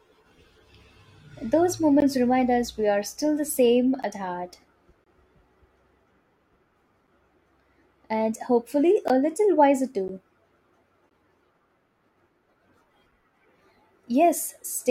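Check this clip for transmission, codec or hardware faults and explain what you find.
The speech has six short silent holes, all gaps between stream segments. They fall at 2.00 s, at 4.03 s between "are still the same" and "at heart", from 5.04 to 5.07 s after "the same at heart", at 9.08 s, at 10.08 s after "little wiser", and at 11.10 s. Their placement on whole-second boundaries fits 1.0 s segments whose timestamps leave small gaps. The player pads each gap with 11 to 25 ms of silence, so the sound stops abruptly and resumes with nothing lost. On a waveform each gap is a flat, silent stretch with hard edges. On a spectrogram it is a thin, fully blank vertical stripe.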